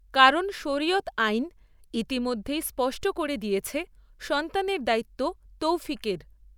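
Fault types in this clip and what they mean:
No technical faults can be heard in this speech recording. Nothing in it points to a problem in how the audio was captured or carried.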